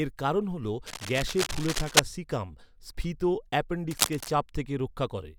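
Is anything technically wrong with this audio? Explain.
Yes, there's cable scratch noise twice: 0.86 to 2.0 s, between "এর কারণ হল" and "সিকাম স্ফীত", then 3.91 to 4.33 s. Dense, ragged scratching sits right up at the speech's level, likely a worn cable or connector being moved so its contact resistance jumps around.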